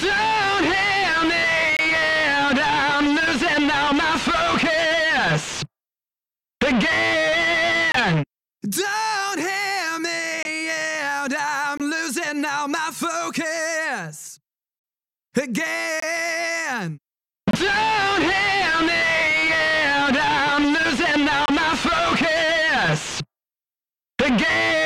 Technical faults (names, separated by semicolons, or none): corrupt frame muted